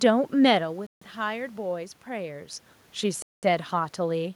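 At 0.87 s the speech cuts to silence for 150 ms and resumes at 1.02 s, and again at 3.22 s it drops out for 205 ms before returning at 3.43 s. Both gaps are clean, abrupt holes rather than fades. The likely cause is a Bluetooth stall: radio interference delayed packets, the headphones' buffer emptied, and playback halted until the retransmitted audio arrived.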